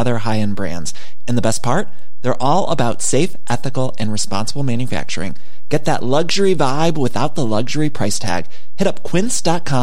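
From start to finish the speech sits on a DC offset of about -12 dBFS, a constant shift of the waveform away from zero. It cannot be heard as a tone, unlike mains hum or rumble, but it eats headroom and shows as steady energy at 0 Hz.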